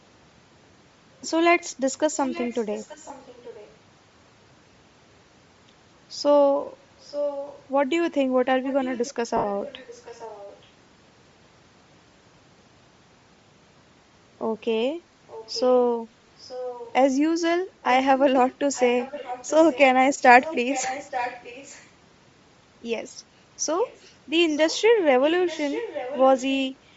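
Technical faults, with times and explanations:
throughout: Bluetooth LC3 compression. The sound is grainy and breathy at the top, with hiss replacing real detail. This is likely the LC3 codec at a rate near 32 kbps with 10 ms frames, emptying upper bands and filling them with noise.
2.2–3.75 s, 7.02–7.64 s, 8.64–10.63 s, 15.28–15.85 s, 16.4–16.93 s, 17.82–19.79 s, 20.42–21.89 s, 23.84–26.56 s: echo leak. A far-end echo canceller likely failed to remove loudspeaker pickup, so a copy returns about 0.88 s late, from faint to fairly clear, loudest near 7.0 s and 20.4 s.
3.08–3.10 s and 9.37–9.44 s: lost LE Audio frames. The decoder filled 20 ms and then 70 ms gaps by replaying the last spectrum with scrambled phase, which fits two and seven lost 10 ms frames. The sound briefly becomes a noisy smear, the longer gap fading.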